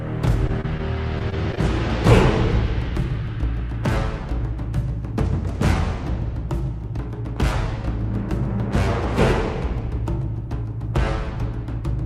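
A short stall from a late packet at 0.47 to 0.51 s holds the last sound for 17 ms while the jitter buffer is empty, then resumes with nothing lost and the playout 17 ms later; on a waveform it appears as a brief run of repeated cycles, and on a spectrogram as frozen bands. At 0.61 to 0.66 s, short concealed packet loss drops 20 ms of audio, and 25 ms of synthesized continuation blends back into the real signal, showing as a smeared patch in the spectrogram. From 1.19 to 1.59 s, repeated packet loss (robotic sound) produces four separate gaps, the longest 20 ms. Together they lose 60 ms, and concealment fills about 15% of the stretch, which sounds choppy and shows as a series of smeared, stuttering blocks.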